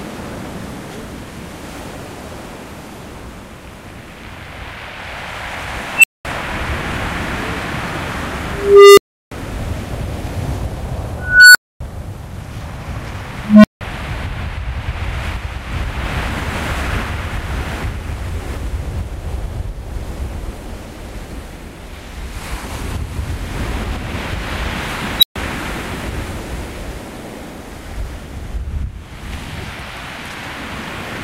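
Unstable filter at 5.95, 8.52, 11.19, 13.45 and 25.19 s: a recursive filter runs away, so a tone of roughly 3 kHz, 400 Hz, 1.5 kHz, 200 Hz and 4 kHz respectively swells over 40 to 455 ms and clips. The values then overflow and the sound cuts out for 128 to 341 ms until the filter resets.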